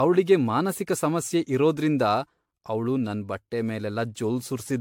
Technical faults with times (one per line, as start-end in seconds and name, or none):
0.00-4.80 generation loss